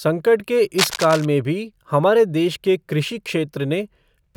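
From 0.78 to 1.26 s, cable scratch noise runs over the speech for about half a second. Dense, ragged bursts of noise sit only slightly below the speech level. It sounds like scratching and rustling laid on top of the talker. The likely cause is a worn cable, connector or control being moved. Its contact resistance then jumps about rapidly, and each jump adds a burst of noise to the signal.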